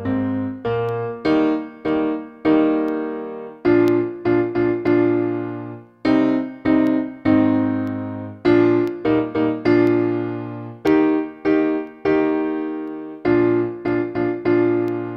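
Periodic USB or driver dropouts run from 0.89 s to 14.88 s, one every 1.0 s, about fifteen in all. Each is a tiny gap, a small fraction of a millisecond, where the signal drops to silence and then resumes, heard as a regular tick that only sounds while there is audio. The strict one-second spacing points to a background task that blocks the USB bus or audio driver on a fixed schedule, briefly starving the stream of samples.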